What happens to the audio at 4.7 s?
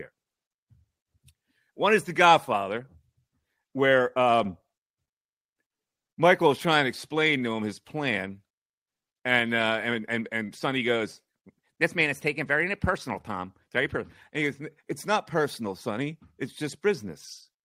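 Packets arrived late, so the jitter buffer kept running dry between 4.44 and 5.09 s: repeated stalls (stutter), four brief gaps filled with continued sound, making the speech drag.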